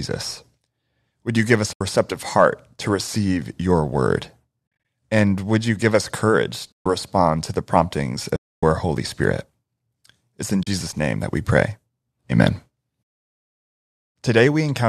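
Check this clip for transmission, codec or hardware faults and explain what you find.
The clip has one recurring fault, AAC frame loss with muting, in five places. The speech also carries a faint coding texture, likely from low-delay AAC compression at 64 kbps.

The dropouts fall at 1.73–1.81 s, between "you give us" and "receptive heart to receive", then at 4.67–4.85 s as scattered gaps with runs of up to about 50 ms, at 6.73–6.86 s, at 8.36–8.63 s after "respond to the promptings", and at 10.63–10.67 s before "name that we pray". Lost frames were zeroed by the decoder. The overlapping windows fade sound out and back in, leaving soft-edged silent holes of 40 to 270 ms. The hole lengths fit runs of short frames of about 10 ms.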